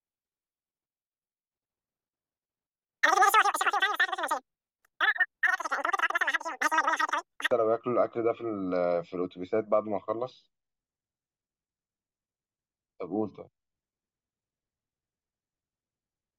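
From the start to about 7.51 s, the speech races by at roughly 2.76 times its natural pace, pitched about 17.6 semitones high, so it comes out as a squeaky, chipmunk-like chatter. This is a wrong sample rate fault: the samples are clocked out far faster than they were captured, with no conversion, so speed and pitch rise together by the same factor. That ratio fits 16 kHz material being played back at 44.1 kHz.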